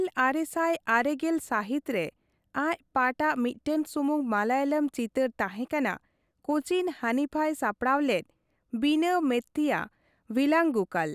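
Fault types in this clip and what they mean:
No technical faults can be heard in this speech clip. Nothing in the audio path calls for comment.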